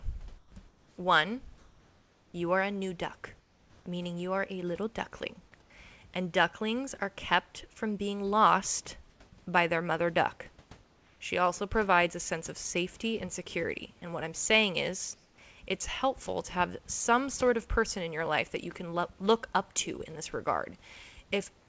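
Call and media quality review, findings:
Comfort noise in place of the background, speech pauses at 0.38–0.52 s, 0.68–0.98 s, 3.40–3.86 s, 5.62–5.70 s and 15.14–15.38 s. Likely cause: sender discontinuous transmission halting packets in gaps, receiver synthesising filler noise. Real room background replaced by flat, textureless hiss, about 2 to 6 dB quieter (deepest drop in first gap), snapping back when speech resumes. Band ends at 8 kHz, consistent with a G.722 call path.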